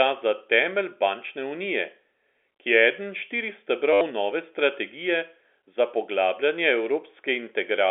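Speech coming through a G.711 telephone line, so it's band-limited to roughly 300 Hz to 3.5 kHz. At 3.93 to 4.01 s there's packet loss with the last packet repeated. About 80 ms of audio went missing and got papered over by replaying the previous chunk, giving a short robotic stutter and a buzz near 100 Hz, which fits 10 ms packets.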